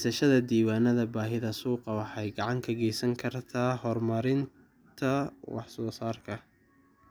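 No technical faults are audible.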